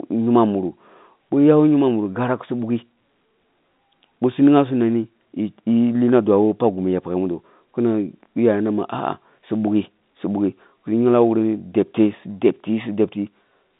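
The speech carries no technical faults, and what shapes it is the ordinary sound of a G.711 A-law telephone line at 64 kbps, with the band running from about 150 Hz to 3.7 kHz and nothing above 3.8 kHz.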